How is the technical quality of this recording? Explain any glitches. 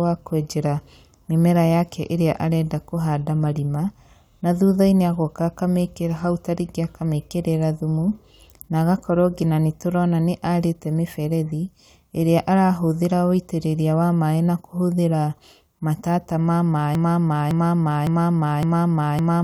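A broken-record loop takes over at 16.95 s and lasts to the end. A fragment about 0.56 s long repeats exactly, back to back, four times. The likely cause is a stalled player or stream resending its last buffer. The speech that should follow is lost.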